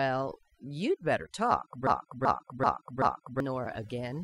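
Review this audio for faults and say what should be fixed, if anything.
Overdone noise removal, throughout: the noise reduction was set too hard, so frequency bands close to its noise estimate are pulled down or cut off. Quieter parts of the voice vanish with them, leaving a lowered background that breaks up into twinkling specks. Lower the reduction strength and check the result by ear before committing.

Broken-record loop, 1.87 to 3.40 s: a 0.38 s fragment repeats back to back four times. The player, encoder or stream likely stalled and kept resending its last held piece, so the audio meant for that span is lost. Re-export or re-capture from the source with enough buffering to avoid stalls.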